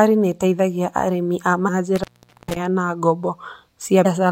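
At 1.67 s, just after "nĩ ĩteithagia arĩithi a", a brief glitch marks damaged data in the compressed stream. A short run of corrupted bytes left the decoder unable to read the frame there. It lost sync and had to find the next valid frame header, so a very short stretch of garbled output replaces the speech.

From 1.96 s to 2.56 s there is an intermittent contact fault. A loose plug or cable opens for about 0.45 s inside that span. The speech drops out abruptly with crackle at the break and again at the reconnection, and faint hiss remains while the circuit is open.

A second instance of damaged data in the compressed stream follows from 4.02 s to 4.06 s. It is a 40 ms glitch where the decoder again misread a corrupted section and had to resynchronise before normal decoding resumed.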